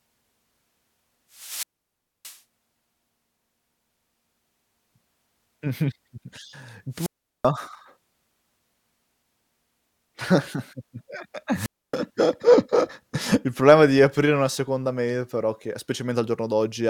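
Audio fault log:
1.33–11.96 s, wireless microphone squelch dropout at 1.33–2.39, 6.93–7.49 and 11.54–11.96 s: the fading radio signal brings rising hiss, then the receiver's squelch mutes the output for about 0.62, 0.38 and 0.28 s.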